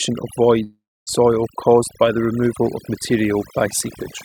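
Overdone noise removal runs through the whole speech clip. Frequency bands near the noise floor are cut away. The background twinkles.

From 0.63 to 1.09 s, the audio fades as the last sound is carried on and decays, then about 270 ms of silence. The likely cause is a long network dropout. It returns at "caused the removal of", with roughly 440 ms lost.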